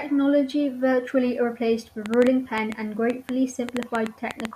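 From 2.06 s, right after "virtually replaced the", a train of clicks ticks and pops over the speech until 4.46 s, audible through the pauses as well. There are about fifteen sharp, near-identical clicks at an uneven pace averaging 6.3 per second, and they jump out to roughly 15 dB above the speech. Repeated pulses of the same shape like this likely come from interference from nearby equipment or a faulty connection or power supply.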